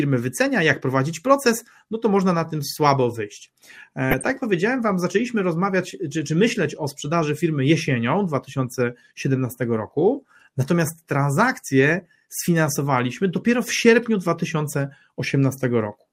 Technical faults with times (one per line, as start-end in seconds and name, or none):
4.11-4.32 DAB burbling